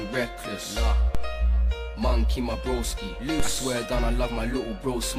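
At 1.15 s the waveform's zero line jumps abruptly, a DC step of about -14 dBFS, and the same happens again at 3.40 s. Each jump registers as a single low thump or click laid over the sound, which carries on unchanged. The offset does not hold. It drains away as though through a 2 Hz high-pass, so the baseline settles back toward zero within a fraction of a second after each step.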